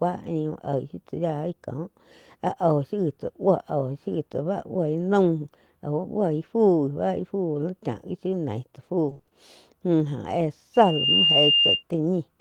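It's a speech recording with two distinct problems. From 9.09 to 9.33 s there's repeated packet loss giving that choppy, robotic sound: six short gaps, none longer than 20 ms, each patched by stretching the last bit of audio, so half that stretch is filler. Then from 10.74 to 11.83 s a loudspeaker feedback squeal takes over. The mic is picking up its own speaker, and a tone at 2.8 kHz swells over a fraction of a second until it sits about 5 dB above the speech.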